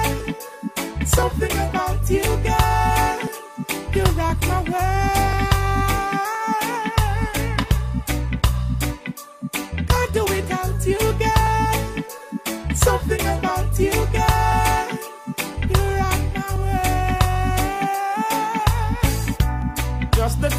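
Periodic USB or driver dropouts run from 0.20 s to 19.62 s, recurring every 1.02 s. Each time the audio path stalls, roughly a millisecond of sound is skipped outright. The splice leaves an evenly spaced tick, about twenty in all.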